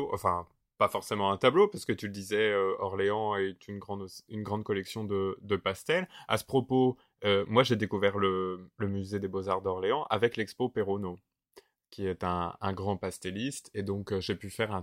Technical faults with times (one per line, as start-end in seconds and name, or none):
none